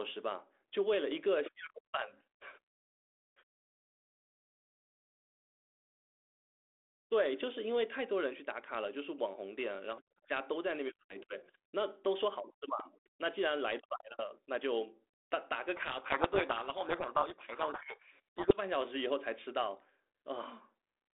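From 15.76 to 18.61 s, a codec payload misread: the G.726 code words arrive in the wrong bit order, so the speech gets buried in harsh distortion.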